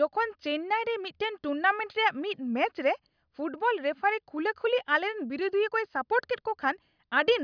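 Nothing in the recording stood out as a technical problem on listening.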